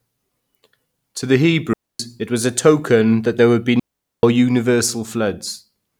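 At 1.73 s, just before "it was a token", and again at 3.80 s after "that there would be", a digital wireless dropout mutes the receiver for 0.26 s, then 0.44 s. Unlike an analog dropout, each gap is clean near-silence without bursts of hiss.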